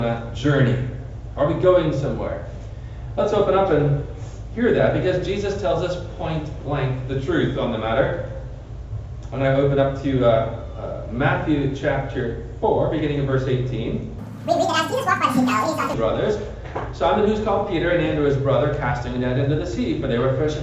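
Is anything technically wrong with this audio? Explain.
Yes. From 14.18 to 15.94 s there is a wrong sample rate fault: the samples are clocked out twice as fast as they were captured, which fits 16 kHz audio played at 32 kHz without conversion. The sound runs at double speed and jumps a full octave (12 semitones) higher.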